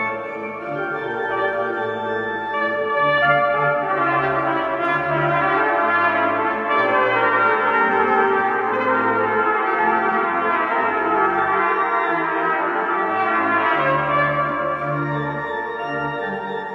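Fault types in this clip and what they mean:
No technical faults are audible anywhere in the recording.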